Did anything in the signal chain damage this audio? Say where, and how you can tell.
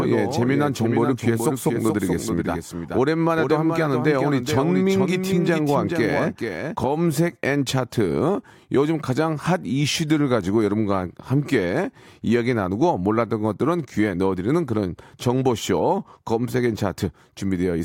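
Yes. A doubled audio track runs from the very start of the speech until 6.76 s, then stops abruptly. A second full-band copy trails the original by roughly 0.4 s, about 5 dB quieter. It has no decay and no room colour, so it is not an acoustic echo. The same signal is simply mixed in twice, out of step. The likely cause is a second, slower capture path feeding the same mix, dropped at 6.76 s.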